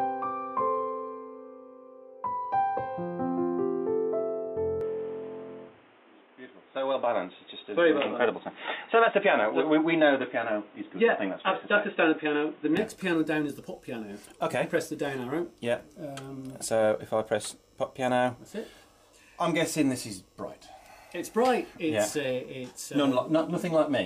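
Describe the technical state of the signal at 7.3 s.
At 7.3 s the signal is band-limited and boxy, inside a stretch from 4.81 to 12.77 s that most likely reflects the input switched to a poorer device. Nothing passes above 3.8 kHz, so a spectrogram shows a hard ceiling there, with a new noise floor roughly 30 dB down. The waveform steps by around 5 dB at 4.81 s with no gap at the switch, and full bandwidth returns at 12.77 s.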